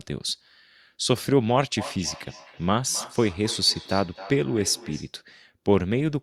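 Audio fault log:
1.77–5.17 s, feedback echo between two devices: the speech returns at a steady interval of about a third of a second, peaking at about −17 dB, as a second nearby device replays it into this microphone. Unlike room reverberation, the repeats arrive as distinct, evenly spaced copies.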